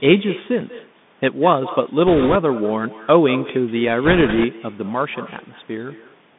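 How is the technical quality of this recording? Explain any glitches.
The recording has poor technical quality, with three kinds of fault: an uncancelled echo, narrowband headset coding, and two bursts of link errors.

Echo with no canceller runs through the whole clip. The far end's loudspeaker feeds its microphone, and nothing subtracts that signal, so the speech returns about a fifth of a second later. The copy sits about 16 dB below the direct sound and is thinner.

The Bluetooth CVSD headset codec is also present throughout, and its damage is plainly audible. The band runs from about 150 Hz to 3.6 kHz, which fits a 64 kbit/s CVSD link. The one-bit adaptive delta coder can't track fast, loud high content, so sibilants turn scratchy and a granular hiss sits under the speech.

Bit errors on a Bluetooth voice link occur from 2.07 to 2.37 s and again from 4.05 to 4.45 s, at an error rate of a few percent. 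Because CVSD gives every bit equal weight, the flips produce a rushing, crackly noise rather than sharp clicks.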